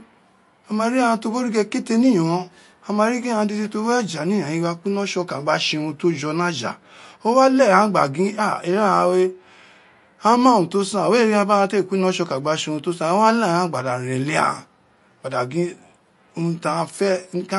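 A speech recording, likely passed through MP3 compression at a starved bitrate (consistent with about 48 kbps). This removes everything above 11.3 kHz and leaves a plainly audible watery swirl with smeared consonant attacks throughout.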